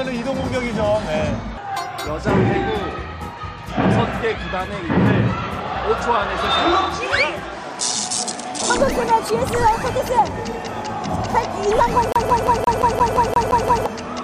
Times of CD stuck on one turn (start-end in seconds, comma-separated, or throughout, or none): 12.12-13.86